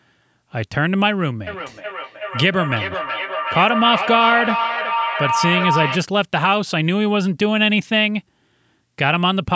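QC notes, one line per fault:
1.47–6.03 s, feedback howl: two devices in one room on the same call formed a microphone-to-loudspeaker loop that gained level each trip, so repeats roughly 400 ms apart grew into a tone around 1 kHz, peaking about 4 dB below the speech.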